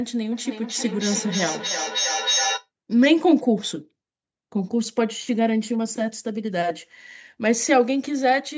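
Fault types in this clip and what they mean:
Feedback echo between two devices: from 0.32 to 2.69 s the speech returns roughly every third of a second, thinner and ringing, the loudest repeat only about 4 dB under the speech. A second device nearby replays this microphone's signal, which it picks up again.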